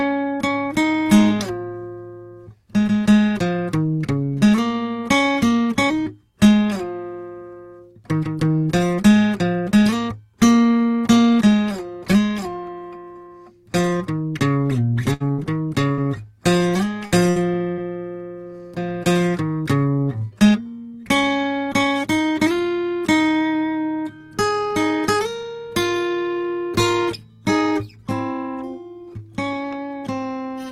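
Six bursts of packet loss hit the music at 15.13, 15.32, 15.92, 17.05, 17.29 and 17.72 s. Each time about 60 ms of audio is missing. The receiver stretches the last sound into a fading buzz or hiss for roughly 60 ms, then jumps ahead.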